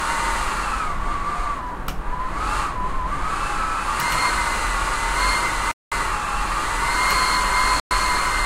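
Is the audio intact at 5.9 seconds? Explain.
No. From 5.71 to 5.92 s the sound cuts to about 200 ms of silence, a flat line in the waveform and a blank vertical band on a spectrogram, then resumes. This is likely a Bluetooth stall: delayed packets emptied the headphone buffer.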